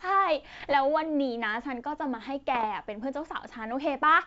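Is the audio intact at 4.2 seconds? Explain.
Yes, the audio is intact at 4.2 seconds, with the speech passing cleanly through G.722 wideband telephone coding at 64 kbit/s and no fault at that moment.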